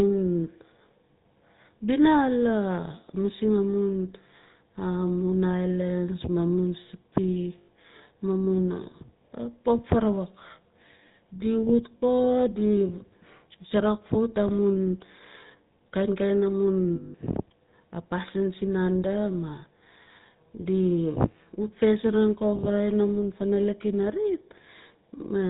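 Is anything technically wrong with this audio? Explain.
Yes. The speech carries the GSM full-rate codec throughout, and it has three short dropouts from lost GSM frames.

The GSM full-rate codec damage is plainly audible from start to finish. The codec models the vocal tract as a filter and excites it with a coarse, evenly spaced pulse train that keeps only a third of the excitation detail, so voices come out buzzy and gravelly. Nothing passes above 4 kHz. The sound fits 13 kbps full-rate GSM. Unlike plain low-bitrate MP3 or a simple lowpass, this is a rough, grainy texture in the voice itself, not just dullness or swirly artefacts.

The lost GSM frames fall at 7.58 to 7.69 s (100 ms), 11.98 to 12.01 s (40 ms) and 16.96 to 17.15 s (180 ms). In each gap the decoder repeats the last good frame's settings, so the sound hangs as a rough, metallic ring instead of cutting to silence. That metallic hold is what separates it from a hard dropout or a stutter of repeated audio.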